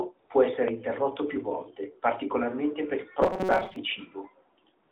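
From 0.20 to 0.30 s and again from 4.84 s to the end, the phone stopped sending speech frames and the receiver substituted AMR comfort noise, a smooth synthetic hiss replacing the real background. From 3.22 to 3.76 s, new audio likely arrived too seldom, so roughly half of it is skipped while short buffers of about 5 ms repeat. The result is robotic sound from repeated short buffers: a rigid metallic buzz at 188 Hz that still roughly tracks the speech, heard over narrowband AMR audio limited to 300 to 3600 Hz.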